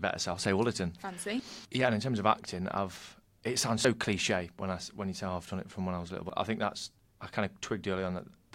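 A speech clip with two short skips, at 3.85 s between "acting I've it sounds" and "cliche when I when", and at 6.30 s after "when I was little" before "I think that's I". Each drops about 50 ms and splices the two sides together. This is likely audio missing between chunks, with processing in 2.5 s blocks. On a waveform or spectrogram, each skip shows as an abrupt vertical seam where the harmonic patterns break off and restart without any gap.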